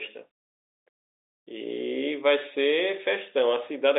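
No faults are audible in the speech, which sits in a normal telephone band of 300 Hz to 3.7 kHz with nothing above 3.8 kHz, consistent with G.711 telephone coding.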